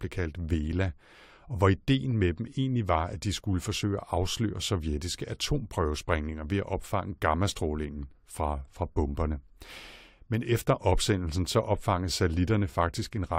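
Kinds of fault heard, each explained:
No faults come through here at all, just ordinary speech with nothing glitching, dropping out or breaking up along the way.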